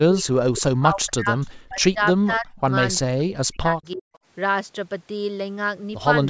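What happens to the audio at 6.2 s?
Nothing goes wrong at 6.2 s: the speech there comes through intact, with only the ordinary call microphone processing shaping it, which trims the lowest bass and leaves nothing above 8 kHz.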